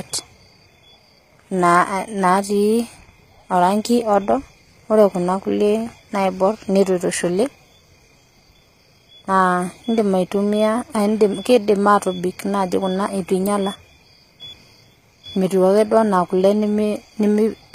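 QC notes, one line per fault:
Throughout, HE-AAC compression: the speech has plainly audible codec damage, with nothing above 14.9 kHz and a treble that sounds bright but synthetic, which fits a low bitrate of around 20 kbps. The likely cause is spectral band replication, where the upper band is rebuilt from copied lower bands under a coarse envelope, so s sounds come out gritty or lispy. This differs from a plain low-pass filter because the top octave stays present but is misaligned with the lower harmonics.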